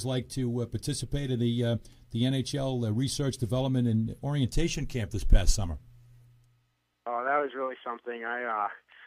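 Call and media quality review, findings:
Nothing turned up on this one, with no dropouts, glitches or distortion anywhere in the audio to chase down.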